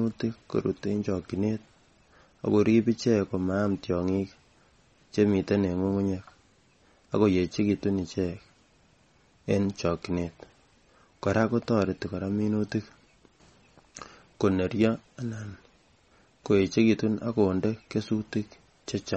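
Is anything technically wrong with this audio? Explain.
Yes, there are two faults.

Throughout the speech, the audio sounds watery and swirly, with nothing above 8.4 kHz. This is likely MP3 compression at a low bitrate, plausibly around 32 kbps. Short of bits, the encoder cuts the treble at a fixed point and drops weak frequency lines, which then flicker between frames.

At 4.45 s a repeated buffer gives a brief click or buzz. New audio arrived late, so the device replayed its last tiny block two extra times with hard joins. The 1.45 ms length fits a buffer of about 64 samples, and essentially no audio is lost.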